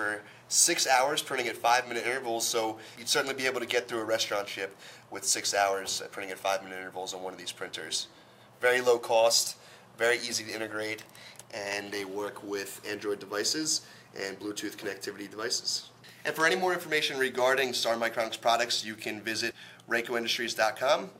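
No technical faults can be heard anywhere in the audio, and the signal holds steady throughout.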